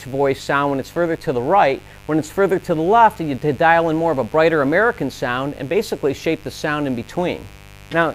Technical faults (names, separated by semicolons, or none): mains buzz